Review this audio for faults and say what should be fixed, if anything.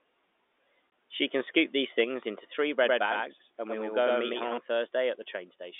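Packet loss filled with silence: at 0.90 to 0.92 s the speech drops out for 20 ms, which fits a single lost packet, and the receiver played silence in its place. The sudden cut to silence and back gives the gap hard edges. A waveform shows a flat gap with abrupt walls. A spectrogram shows a thin vertical blank stripe. Enabling packet loss concealment or a jitter buffer that interpolates would keep such gaps from playing as dead silence.

Microphone overload: from 1.48 to 1.59 s the loudest syllables take on a harsh, crackling edge, with peaks pushed about 3 dB past full scale and a small fraction of samples flattened. The likely cause is an input volume set too high for the converter. On the waveform the peaks are squared off at the rails. On the spectrogram, smeared harmonics and broadband splatter spread across the band there. Lowering the microphone input gain so peaks stay several decibels below full scale would prevent this.

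Microphone volume stepped down: at 2.04 s the voice and the background fall together by about 4 dB in one step, shortly after the distorted peak. This is likely the call software cutting the device's input volume in reaction to that overload. The waveform envelope drops abruptly and stays lower. On a spectrogram, everything after that point is uniformly dimmer, with a vertical boundary. Setting a correct fixed input level, or disabling automatic microphone gain adjustment, would avoid the jump.

Doubled audio track: from 2.84 to 4.58 s a second, equally loud copy of the sound runs about a tenth of a second behind, giving a stuttering, double-spoken effect with no room decay. It likely comes from the same audio being captured twice through a slower path. On the waveform every syllable appears twice at a fixed offset. The spectrogram shows each pattern repeated at that spacing, with the copy starting and stopping abruptly. 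Making sure only one capture path feeds the mix would prevent it.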